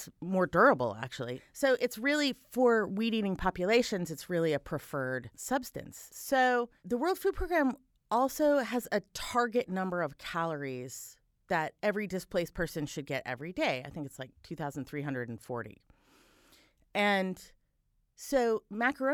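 No technical faults can be heard anywhere in this speech recording. There is nothing to place on the timeline and no breakdown to explain.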